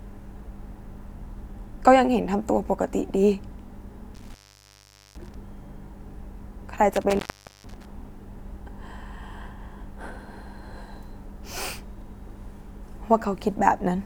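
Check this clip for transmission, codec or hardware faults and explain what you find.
Two dropouts from an intermittent contact. Between 4.15 and 5.35 s, then 6.92 and 7.90 s, the speech cuts out for about 0.81 s and 0.45 s, crackling at each edge with faint hiss in the gap. A loose cable or plug is briefly opening the signal path.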